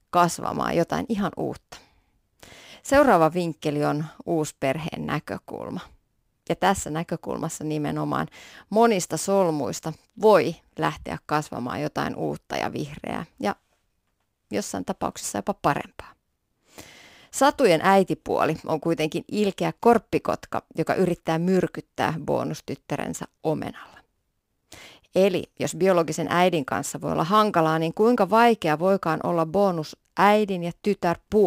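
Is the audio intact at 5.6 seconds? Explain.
No, not quite. At 5.6 seconds, like everywhere else in this speech clip, there's sample clock jitter running the whole way through. The converter's clock wobbles by something like 7 microseconds, so each sample lands a little early or late, and the error scales with how steeply the waveform is moving. You hear it as a faint hiss or graininess, roughly 30 dB under the signal, that gets stronger on loud, bright sounds and drops away in the pauses.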